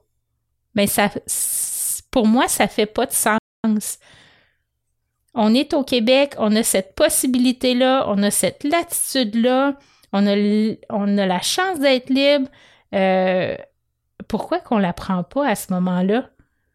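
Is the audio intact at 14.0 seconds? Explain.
Yes, at 14.0 seconds the audio plays through intact, with no fault at that moment.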